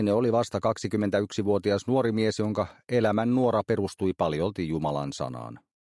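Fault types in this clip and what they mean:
No technical fault can be heard in the signal: level, timing and frequency content stay steady, with no dropouts, distortion or interruptions anywhere in the audio.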